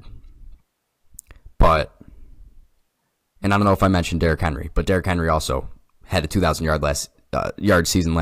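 Speech recording with no audible technical faults.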